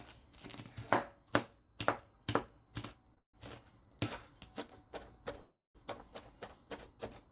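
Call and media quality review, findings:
Short stall from a late packet, 3.14–3.19 s: sound held slightly too long with a slight buzz or dip, about 27 ms of stretched fill. Jitter buffer briefly ran empty; receiver extended the last audio until the packet landed, then resumed in place. Nothing lost, timing pushed back.

Call audio freeze, 3.19–3.36 s: continues straight from the stall, fill fading to silence for about 100 ms, then playback resumes where it stopped. Likely packets held in transit, jitter buffer empty. Adds roughly 150 ms delay, no content missing.

Call audio freeze, 5.41–5.77 s: same pattern, longer. Fading fill then about 180 ms of silence, audio picks up from the same point. Inserts roughly 340 ms gap. Band limit at 4 kHz on this narrowband path.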